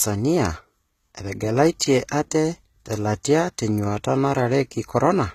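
HE-AAC compression runs throughout the speech: the treble is synthetic, s sounds turn gritty, and nothing remains above 14.9 kHz, likely from band replication at roughly 20 kbps. Pre-echo appears at 1.79 s and again at 3.23 s, where codec noise spreads backward across a transform block, leaving a short hiss of about 12 ms and 13 ms before each attack and softening it.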